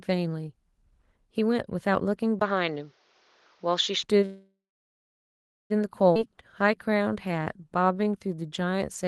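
Speech sent over a call link, where the Opus coding sounds consistent with a setting of about 20 kbps and a 12 kHz band limit. From 2.39 to 4.05 s the system likely switched input to a poorer device, an input switched to a poorer device, so the sound turns duller, with nothing above 6.9 kHz, a faint new noise floor and a 20 ms silence at the switch, while the level stays about the same. From 4.25 to 5.72 s, delayed packets likely emptied the jitter buffer, causing a call audio freeze: a 1.45 s gap, mostly about 1.1 s of silence, after which the speech resumes with nothing lost. At 6.14 to 6.17 s the receiver skipped ahead past about a second of waiting audio, so playback jumps forward with an almost direct join. From 6.30 to 9.06 s a jitter buffer slow-down repeats pitch periods to rebuild its reserve, adding 265 ms, so the speech runs at 91% speed with unchanged pitch and drawn-out sounds.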